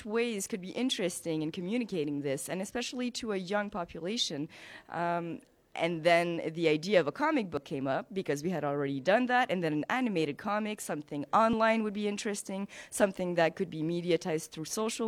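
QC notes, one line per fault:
7.57 s and 11.53–11.56 s, overlap between stream segments: at these 4-second segment joins, overlapping timestamps made the player discard about 12 ms and 27 ms of genuine sound, so the waveform jumps abruptly, heard as a click or tiny skip and visible as a thin full-band vertical line on a spectrogram.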